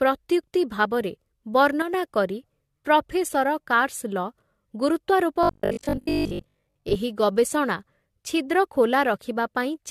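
Right through the speech there's generation loss, likely from a few passes through AAC at around 64 kbit/s: swirly, hollow, blurred attacks. From 1.82 to 1.94 s comes a sudden gain jump, level and noise dropping together by about 6 dB, likely a setting applied without a ramp. Between 5.43 and 6.97 s you get robotic sound from repeated short buffers: a stiff 50 Hz buzz, likely 20 ms chunks looped while most of the real audio is skipped.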